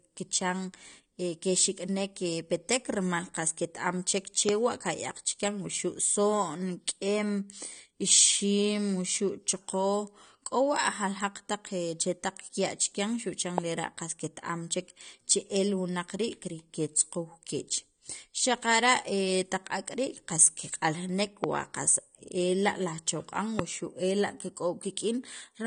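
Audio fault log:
throughout, AAC compression: the speech sounds dull and smeared, with plainly audible codec damage and nothing above 9.7 kHz. That's likely a low-bitrate AAC-LC encode, which fits around 32 kbps. The encoder has lowered its cut-off and quantised the remaining spectrum coarsely.
4.49–4.51 s, 13.58–13.60 s, 21.44–21.46 s, 23.59–23.61 s, loud pop: each is a single sharp pop, roughly 20 dB above the speech, which carries on underneath. It's likely a sudden voltage pulse from a plug, switch, static or driver glitch, added on top of the signal.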